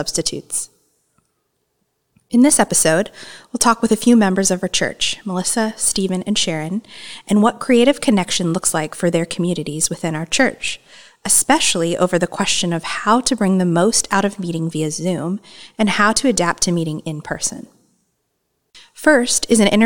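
No technical faults are audible anywhere in this speech recording.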